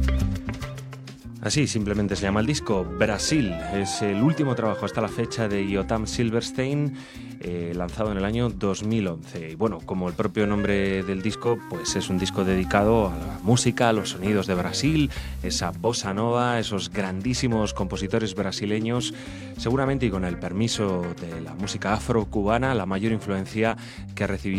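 Digital radio blending to analogue, 11.33 to 16.12 s: the receiver lost its digital stream and cross-faded over 471 ms to the FM broadcast, then back. Hiss rises to roughly 30 dB below the signal, and level shifts about 2 dB.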